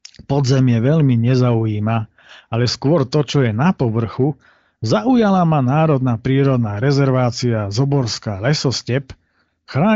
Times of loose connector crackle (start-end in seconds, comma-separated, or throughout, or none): none